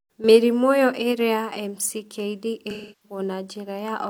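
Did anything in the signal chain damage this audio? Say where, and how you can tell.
Yes, it's a codec problem: AAC frame loss with concealment from 2.70 to 3.19 s. The decoder patches the gap from the last good spectrum, so the speech smears and washes out.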